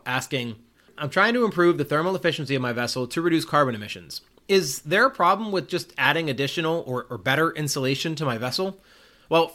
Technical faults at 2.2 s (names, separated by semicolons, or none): none